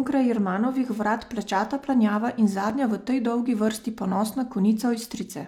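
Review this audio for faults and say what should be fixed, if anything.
A gap between stream segments cuts the speech at 2.70 s: a hard-edged hole of about 5 ms where segment timestamps leave space, filled with silence. Unlike a dropout, no audio is lost; the sound just resumes slightly late. Align segment timestamps so consecutive segments join without gaps.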